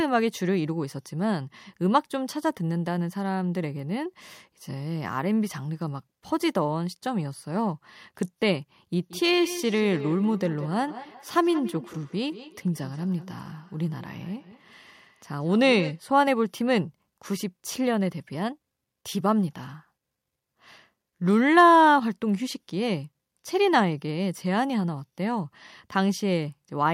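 From 8.97 to 16.04 s the speech comes back about every fifth of a second, thin and ringing, up to about 14 dB below it: feedback echo between two devices.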